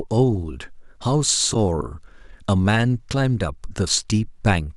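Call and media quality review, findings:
Corrupt frame decoded, 1.51 to 1.56 s: short chirp-like burst in the speech, peaking around -10 dBFS. Codec decoder path. Damaged bits in what sounds like two consecutive frames were decoded as-is. Misread gains and codes placed energy at wrong frequencies.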